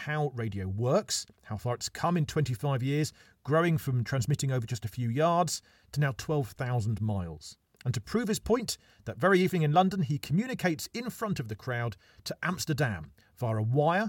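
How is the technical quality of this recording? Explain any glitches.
The speech recording comes through without any audible technical faults, so there are no glitches to explain.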